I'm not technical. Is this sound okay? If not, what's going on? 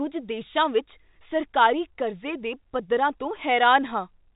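Yes, this sound is okay, and nothing is going wrong with it.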